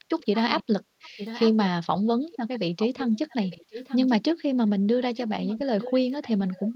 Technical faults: echo leak

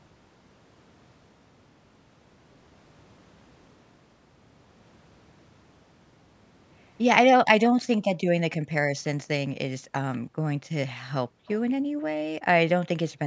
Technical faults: background gated by the echo canceller; echo leak

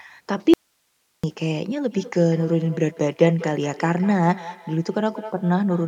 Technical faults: audio dropout to a faint residue; feedback echo between two devices

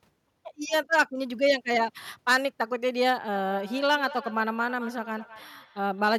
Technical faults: feedback echo between two devices

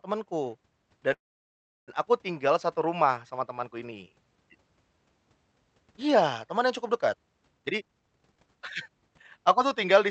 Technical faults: call audio freeze; jitter buffer speed-up

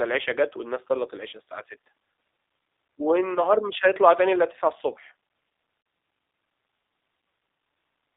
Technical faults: G.729 codec; VoIP packet loss concealed by the speech codec

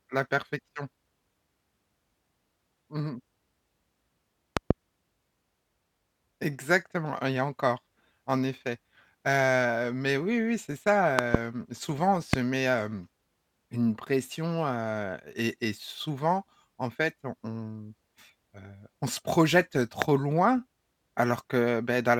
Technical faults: loud pop

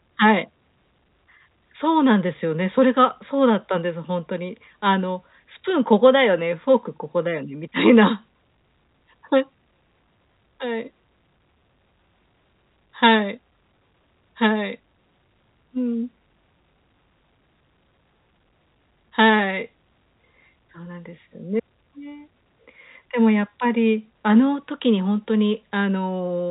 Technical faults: none

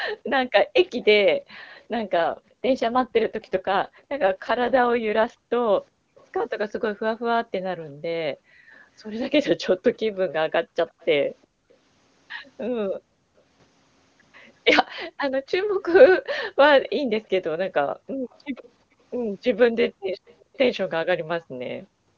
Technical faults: background gated by the echo canceller; echo leak; AMR rate drop

